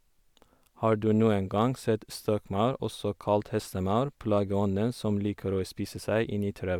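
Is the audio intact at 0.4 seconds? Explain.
Yes, at 0.4 seconds the speech plays through cleanly, with no dropout, click, distortion or other fault at that point.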